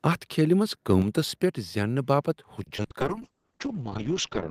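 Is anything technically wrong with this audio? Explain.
Yes. The audio has four kinds of fault: clipping, two sudden level drops, a burst of packet loss, and a late fall in call bitrate.

Microphone overload, 0.90–0.95 s, between "کھیلہ منز" and "پیٹھ زینہ": the peaks exceed full scale by about 1 dB, likely because the input gain was set too high. The tops are sheared off, which gives a brief harsh crackle. The waveform shows flat-topped peaks, and the spectrogram shows a smear of broadband energy.

Microphone volume stepped down, at 1.02 s (about −5 dB, just after the clipped peak) and at 2.31 s (about −3 dB, after "پیٹھ زینہ"): the sound and the background both drop abruptly. This is likely the call software cutting the input gain in a single step. In the waveform the envelope steps down sharply, and the spectrogram dims uniformly across all frequencies.

Repeated packet loss (robotic sound), 2.63–2.92 s: four short holes, the longest 40 ms, are patched by stretching the preceding sound. 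The concealment fills 110 ms of the span and leaves 80 ms missing. The sound is choppy, with pieces missing. The spectrogram shows repeated, smeared harmonics broken up by gaps.

Call bitrate drop, 3.02 s to the end: the audio turns rough and muffled, with the top band cut at 8 kHz where it previously reached 20 kHz. This fits the encoder falling from about 48 kbps to around 7 kbps. The spectrogram is blank above 8 kHz, with coarse, blocky texture below it.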